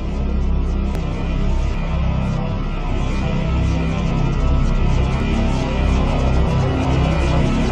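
Little skips ahead at 0.95, 1.74, 4.11, 5.20 and 6.85 s, likely a dropped buffer (overrun) each time. Short chunks vanish, longest at 1.74 s.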